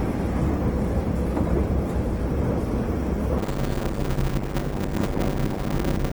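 This clip of everyday sounds has a grainy, rough texture from start to finish. Tones turn noisy rather than clean, though the full audio bandwidth is kept. This is likely Opus compression in its music mode at around 16 kbps, which fills starved bands with noise instead of leaving holes. From 3.38 s to the end, a block size mismatch (padded) sets in. A steady 100 Hz buzz appears. The sound runs at about 0.53 times normal speed but keeps its timbre. That fits short blocks of about 256 samples being padded with silence to fill longer reads, adding a tiny gap a hundred times a second.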